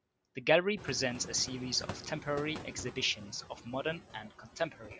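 Throughout the clip, a noise suppressor is treating the steady room background as something to remove, pulling those bands down by about 14 dB frame by frame. As a result, the noise sinks in the gaps between phrases and swells back underneath the speech, most noticeably after the room noise climbs by about 14 dB near 1 s.

From 4.23 s to the end of the clip, the same noise suppressor mistakes part of the speech for background noise and turns it down along with the room sound, by as much as about 12 dB. Only a few tenths of a second are affected in all, but there the quieter parts, such as soft consonants and trailing word endings, come across as swallowed or faint.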